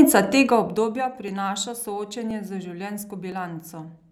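From 0.37 to 1.07 s the level is pulled down by roughly 15 dB in coarse 1 dB steps, about twenty a second, with no smoothing between them. Each jump adds a tiny click, so zipper noise rides on the speech as a fine ticking buzz while the fade runs.

Between 1.28 and 3.32 s, periodic USB or driver dropouts occur every 1.02 s as a background task stalls the audio path. About a millisecond of signal is skipped outright each time, leaving a short, evenly spaced tick or pop in the speech.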